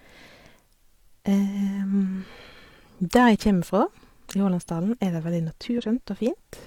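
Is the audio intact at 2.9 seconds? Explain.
Yes, the speech at 2.9 seconds is intact, with no fault audible at that moment.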